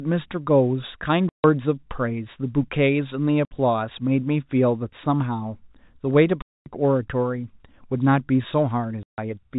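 Packets in the speech stream were lost, and the receiver played silence in their place instead of concealing the gaps. This packet loss filled with silence punches holes at 1.29–1.44 s (150 ms), 3.45–3.51 s (60 ms), 6.42–6.66 s (240 ms) and 9.03–9.18 s (150 ms). Every gap is a multiple of 30 ms, which fits 30 ms packets. The speech drops out abruptly at hard edges, on the narrowband G.711 telephone sound.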